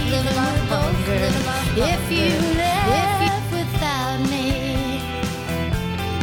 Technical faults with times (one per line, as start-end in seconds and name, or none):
0.00-3.28 doubled audio track